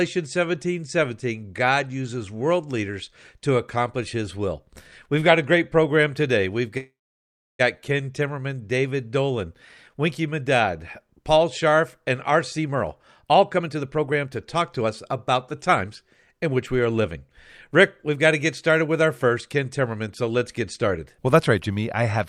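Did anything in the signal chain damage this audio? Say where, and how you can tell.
Yes. From 6.77 s to 7.61 s the sound stops and is replaced by a short continuation of the last moment that fades away, leaving about 670 ms of near-silence before the audio resumes exactly where it left off. Nothing is lost, but the audio after it now runs about 818 ms later. This is the network stage, likely a call audio freeze: packets stalled in transit, the jitter buffer ran dry, and the receiver filled the wait with concealment until delivery restarted.

Later the audio sounds hurried but keeps the same pitch. This happens in three stretches: 12.30 to 15.91 s at 116% speed, 16.33 to 17.17 s at 109%, and 17.71 to 20.37 s at 105%. This is jitter buffer speed-up, again at the network and buffer stage. With the buffer holding more audio than it aims for, the receiver trimmed many pitch-period-sized slices to catch up, removing roughly 0.7 s, a tenth of a second, and 0.15 s in the three stretches.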